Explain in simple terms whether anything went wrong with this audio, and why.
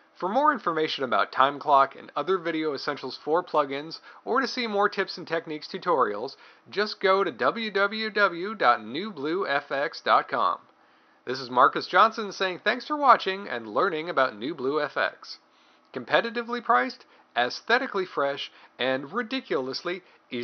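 Nothing stood out as wrong when listening to this audio.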